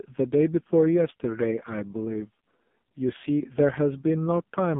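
AMR narrowband mobile codec damage runs through the whole clip. The audio is squeezed into the telephone band of roughly 150 Hz to 3.5 kHz, with nothing at all above 3.6 kHz, so sibilants and breath lose their edge. The coder rebuilds the voice from a vocal-tract model excited by a few pulses per subframe, and at this heavy level of damage the result is buzzy and synthetic, which points to a very low rate near 5.15 kbps.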